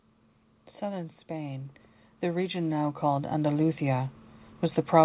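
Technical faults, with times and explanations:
0.81–4.2 s: automatic gain rising. The gain control judged the input too quiet and raised it by about 12 dB over some three seconds. The background noise swells along with the speech, which sets it apart from a speaker simply talking louder.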